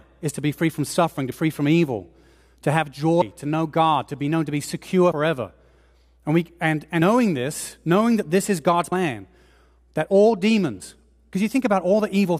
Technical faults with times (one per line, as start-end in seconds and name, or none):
1.32 audio missing between chunks
3.22 audio missing between chunks
7.02 audio missing between chunks
8.92 audio missing between chunks
10.82 audio missing between chunks